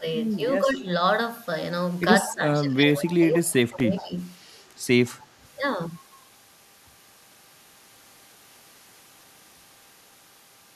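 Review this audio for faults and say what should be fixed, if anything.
The speech dips at 0.00–0.04, 0.62–0.88, 2.24–2.45 and 2.62–4.14 s, bottoming out around 20 dB down in that last long stretch. That's speech suppressed in double talk, likely the echo canceller ducking the talker while the far side talked. Better double-talk detection would keep it from clamping down.

At 3.80 s there's a tiny tick: a block of digital silence about 1.3 ms long, which fits a 64-sample block dropped to zeros. The hard edges on both sides cause the click. Giving the audio thread more buffer headroom should stop it.

Around 3.97–4.03 s a faint delayed copy of the sound pokes through, roughly 20 dB below the speech and 167 ms behind it. That's an echo leak, likely loudspeaker pickup the canceller didn't fully remove. Tighter echo-path tracking or a stronger residual echo suppressor should fix it.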